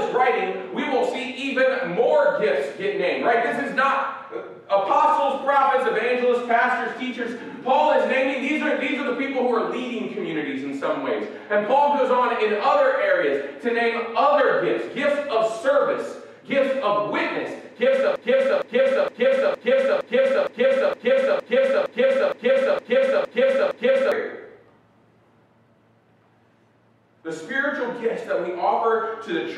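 A broken-record loop runs from 18.16 to 24.12 s. A 0.46 s fragment repeats exactly, 13 times, replacing the audio. A stalled player or stream likely caused it.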